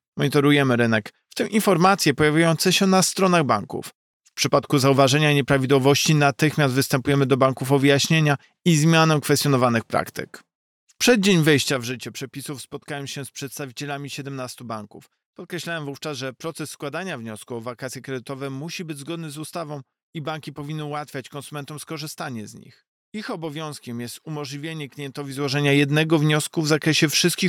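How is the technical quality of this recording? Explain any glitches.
The recording has zipper noise in two places. From 11.6 to 12.0 s the level drops by roughly 15 dB, and from 25.24 to 25.72 s it rises by roughly the same amount. Each change happens in 1 dB steps, around 30 a second, with no smoothing. Every step clicks, so a fast ticking zip rides on the sound.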